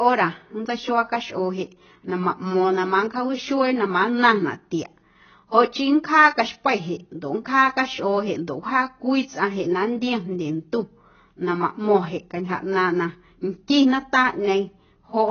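From start to end, the speech is band-limited, with nothing above about 6.6 kHz. Sibilants sound dull and smeared, and sustained vowels carry a warbling, fizzy texture. This is heavy damage of the kind caused by AAC compression, likely AAC-LC at a very low bitrate, which the sound points to as around 16 kbps. Starved of bits, the encoder lowered its cut-off and quantised the remaining bands coarsely. That leaves gaps and substitute noise in the spectrum.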